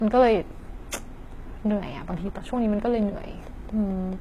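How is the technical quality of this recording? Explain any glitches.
The recording has two clear technical problems: a dull, coded sound throughout, and a run of regular clicks in its latter part.

Low-bitrate audio saved at a high bitrate runs through the whole speech clip. Nothing is present above 14.8 kHz, and the smeared, watery texture of heavy coding is audible. A very low-bitrate stage, fitting about 20 kbit/s HE-AAC, was likely re-encoded as high-bitrate MP3. The larger file cannot restore the lost detail.

A train of clicks runs from 1.70 s to 4.14 s. About ten clicks arrive at a steady 4.53 per second. They sit at roughly the level of the speech and tick through the pauses too. Interference or a faulty connection is the likely cause of the repeated pulse.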